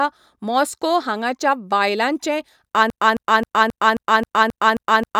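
Right after "मॉस्को हांगाच्या बायलांचें", from 2.9 s to the end, a 0.27 s fragment repeats nine times. This broken-record loop likely comes from a stalled player resending its last buffer.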